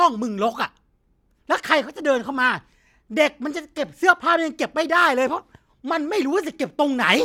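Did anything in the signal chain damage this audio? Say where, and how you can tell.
No, nothing in the chain audibly damaged this speech.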